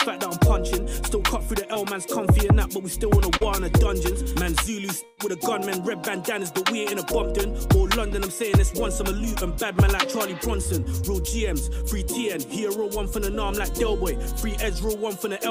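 Short concealed packet loss occurs at 1.73 to 1.77 s and 3.37 to 3.43 s, where about 20 ms and then 40 ms of audio never arrived in time. The decoder extrapolated from the preceding sound to bridge each gap, leaving a brief smear or wobble. At 5.05 to 5.19 s a burst of packet loss removes about 120 ms. The receiver sustains the last sound across the whole gap with no silent stretch, fading it as it goes, and playback then resumes further along with that section missing.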